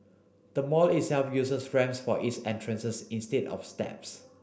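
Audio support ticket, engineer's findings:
Nothing stood out on listening to the speech recording; no issue found to attribute to any component.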